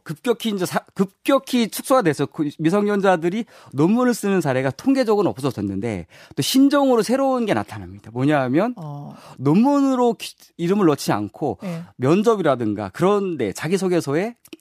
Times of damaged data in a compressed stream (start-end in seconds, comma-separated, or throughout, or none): none